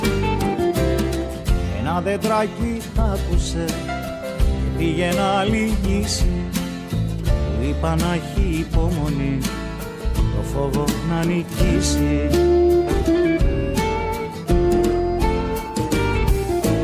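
No technical faults can be heard anywhere in the audio; the signal runs continuously with no breaks or disturbances at any point.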